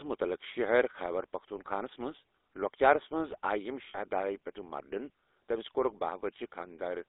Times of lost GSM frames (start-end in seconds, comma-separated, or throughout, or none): 3.88-3.98